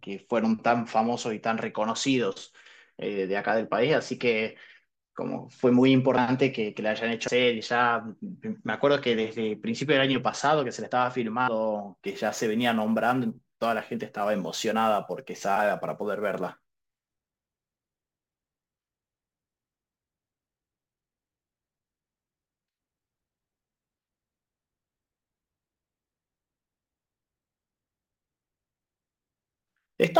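At 7.27 s and again at 11.47 s the speech jumps forward. These are compressed frames skipped: about 150 ms, then about 300 ms, of audio went missing or was rejected as damaged, consistent with several whole 24 ms frames dropping out.

From 12.06 s to the end, a fine hiss and roughness rides on the louder and brighter parts of the speech and disappears in pauses. This is sample clock jitter: timing wobble of roughly 7 µs leaves an error about 30 dB below the signal.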